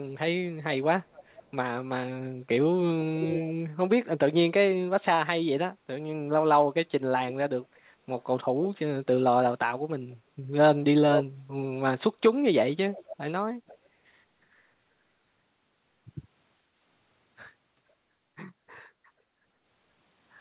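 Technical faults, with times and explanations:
1.13–1.44 s, 3.21–3.54 s, 10.12–10.16 s, 11.13–11.25 s, 12.93–13.17 s and 13.67–13.78 s, echo leak: in scraps, a second copy of the speech returns about 0.48 s late. It ranges from barely audible to roughly as loud as the speech itself, most likely because a far-end echo canceller let through speaker sound picked up by its microphone. Unlike room reverberation, which is a smooth decaying tail, this is a distinct, fixed-delay repeat that comes and goes.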